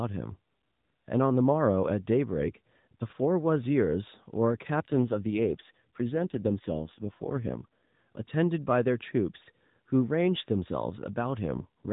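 Speech over an AMR narrowband mobile link shows two AMR rate drops, at 4.92 to 8.25 s and 11.54 to 11.92 s. The voice turns rougher and more synthetic within the same 4 kHz band and with no gap, which fits the network stepping the codec down from 12.2 to 5.9 kbps to spend bits on error protection.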